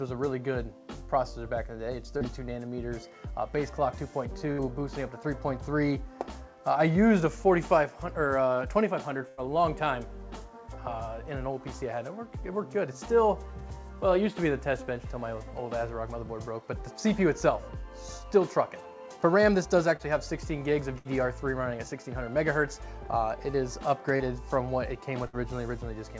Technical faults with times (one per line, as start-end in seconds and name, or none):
2.18-2.24 short concealed packet loss
4.52-4.61 burst of packet loss
9.28-9.40 burst of packet loss
19.96-20.02 short concealed packet loss
20.98-21.08 burst of packet loss
24.17-24.23 short concealed packet loss
25.28-25.36 burst of packet loss